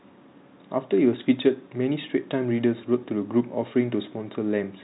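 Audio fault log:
No faults heard in this speech clip.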